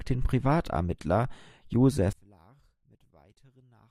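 A short speech recording in which, from 2.13 s to the end, the level falls by about 33 dB to a faint residue. This points to one channel inverted, likely cancelling the shared centre signal on mono summing. The waveform abruptly collapses to near-flat, and the spectrogram goes almost blank.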